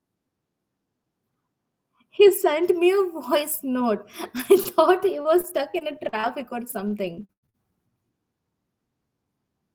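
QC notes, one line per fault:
4.37–7.55 s, repeated packet loss (robotic sound): 13 short holes in quick succession, the longest just under 100 ms. Each is papered over by repeating the last bit of sound, so the speech turns choppy, with about 0.4 s lost.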